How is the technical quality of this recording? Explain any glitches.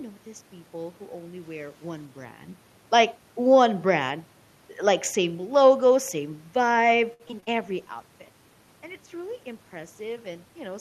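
The recording has two glitches near the end, one after the other.

From 7.13 to 7.56 s, just after "same logo same vibe", the sound turns choppy and robotic. This is repeated packet loss: five short holes, the longest 64 ms, each patched by stretching the previous sound.

From 7.6 s to the end, the sound becomes rougher and duller. This is a call bitrate drop from 64 to 26 kbps, which forced coarser coding with less high-frequency detail.

The level shifts around 2 s and 7.5 s come from the talker moving relative to the microphone, and the background noise is room noise.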